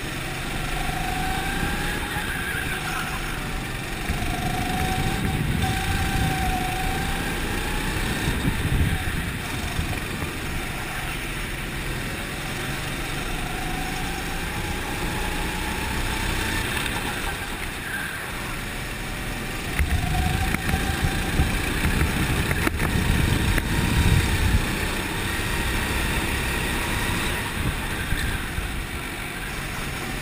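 Clock slip clicks run from 0.10 s to 30.2 s, a soft rattle of about a thousand ticks roughly every 30 ms. Two unsynchronised clocks, likely differing by around 700 ppm, force a single sample to be dropped or repeated each time.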